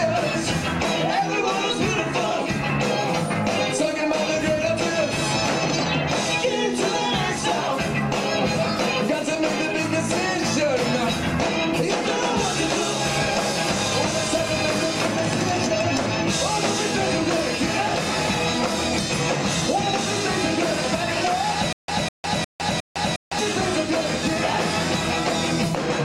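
Stutter with silent gaps, 21.73 to 23.39 s: a 202 ms burst repeats four times between 156 ms silences, likely a stalled stream replaying its last fragment.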